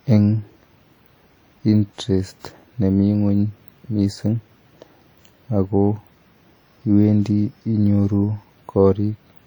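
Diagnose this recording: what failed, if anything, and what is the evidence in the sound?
The failure is at the codec stage: low-bitrate audio saved at a high bitrate. It runs through the whole speech clip. The sound carries the artefacts of a heavily compressed first encode. The final file looks generous, with content reaching up to about 20.2 kHz, but that detail cannot replace what was already lost. The likely chain is a WMA encode at around 48 kbit/s, later re-saved as MP3 at about 188 kbit/s. The second pass preserves the damage without repairing it.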